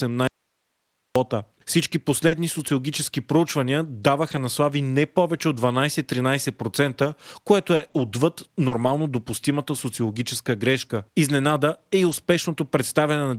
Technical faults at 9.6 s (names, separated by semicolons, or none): none